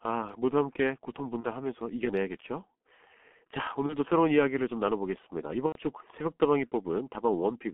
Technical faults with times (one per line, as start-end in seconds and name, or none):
0.00-7.73 G.723.1 codec
1.40-1.47 VoIP packet loss concealed by the speech codec
3.86-3.96 VoIP packet loss concealed by the speech codec
5.66-5.80 VoIP packet loss concealed by the speech codec